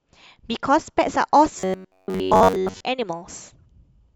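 From 1.58 to 2.83 s the speech goes robotic, a stiff metallic buzz locked at about 94 Hz that only loosely tracks the words. It's likely repeated short buffers: a roughly 10.7 ms slice looping over most of that stretch while fresh audio gets skipped.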